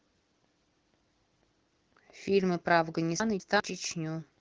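At 3.2 s the speech jumps: a pair of chunks plays out of order, so the 200 ms stretch meant for 3.2 s arrives one chunk late and is heard after its successor, ending at 3.6 s. Nothing drops out, but the phrase sounds briefly scrambled, with three hard joins. A waveform shows abrupt discontinuities at each splice, and a spectrogram shows formant tracks that break and restart out of sequence. The wideband codec's slight coloration fits a rate near 16 kbit/s.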